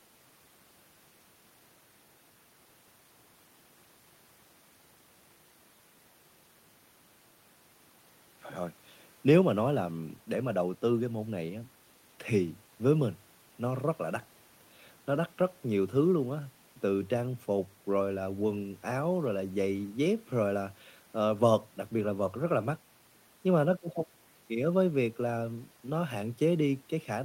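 A speech recording, with nothing technically wrong with it.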